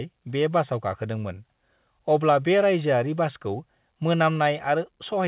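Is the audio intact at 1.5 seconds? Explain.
Yes, the audio is intact at 1.5 seconds, with nothing there beyond the narrow band of a telephone-style call path that carries nothing above about 4 kHz.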